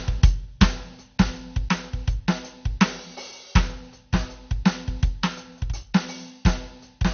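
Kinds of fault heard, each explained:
MP2 compression: The music sounds dull throughout, with nothing above 6.5 kHz. Upper sub-bands switch off and flicker, and what remains has a gurgling, grainy texture. The likely cause is MPEG Layer II coding starved of bits, which fits a rate near 48 kbps.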